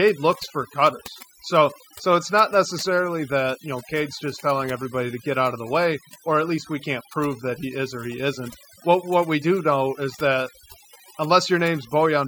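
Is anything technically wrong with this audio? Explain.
Yes. Throughout the speech, overdone noise removal strips frequency bands near the estimated noise floor, leaving near-silent gaps with twinkling specks, unlike the steady hiss of unremoved noise.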